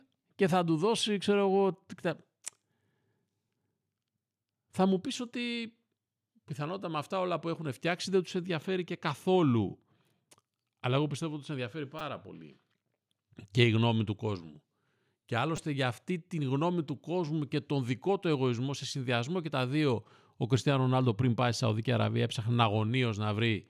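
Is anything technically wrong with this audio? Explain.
Yes. A repeated buffer fault occurs twice in this speech, at 11.99 s and at 15.57 s. Each time, new audio failed to arrive in time, so the output replayed its last block three extra times. That block is very short, consistent with a 5 ms buffer, so the repeats don't form an audible stutter. Instead, each fault sounds like a brief click or tiny buzz with hard joins, and roughly 15 ms of audio goes missing.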